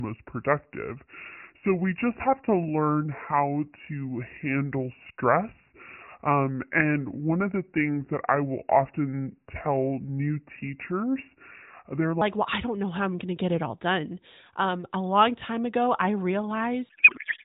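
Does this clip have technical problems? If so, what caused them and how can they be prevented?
Yes. From 0.00 to 12.2 s, the section at the wrong speed was most likely played against the wrong clock, at about 0.745 times its recorded rate. The speech comes out slow, drawn out and roughly five semitones deeper, with pitch and tempo dropping together. Locking playback and editing to the recording's true sample rate prevents this.

From 16.89 to 17.44 s there is a codec payload misread. The AMR frames fit octet-aligned packing but are unpacked as bandwidth-efficient, so every field lands in the wrong place. The narrowband speech collapses into garbled noise and warble that barely tracks it. Negotiating and enforcing one AMR payload format at both ends during call setup prevents this.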